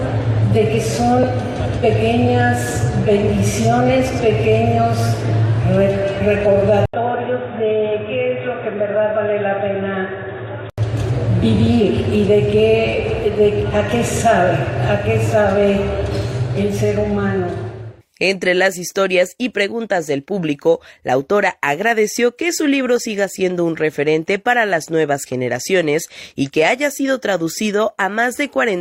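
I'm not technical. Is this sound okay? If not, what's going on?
No. From 6.86 to 10.78 s the sound drops out for a split second, then goes muffled and quieter, likely an input switched to a poorer device.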